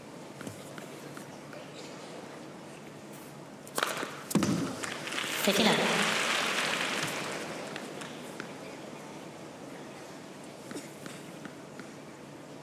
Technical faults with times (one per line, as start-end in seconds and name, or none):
0.00-12.63 wrong sample rate